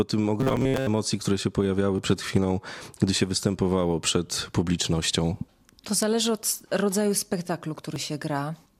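From 0.40 to 0.87 s the speech collapses into a rigid, metallic buzz locked at 133 Hz, with the syllables still roughly traceable underneath. This is robotic sound from repeated short buffers. The likely cause is audio arriving too late, so the software keeps replaying its last fragment instead of new material. A 133 Hz buzz points to a loop of about 7.5 ms, and most of the signal in this span appears to be repeats. The fixed, unchanging pitch over a sustained stretch separates it from a simple dropout.

At 1.98 s, between "które się" and "przed chwilą gdy się", and again at 7.96 s, right after "zależy od rodzaju spektaklu", there is audio missing between chunks. A sliver of about a hundredth of a second is cut and the edges are butted together, which fits processing in 3-second blocks. Unlike the buzz, nothing repeats. Each one is a single instant skip, too short to swallow a syllable.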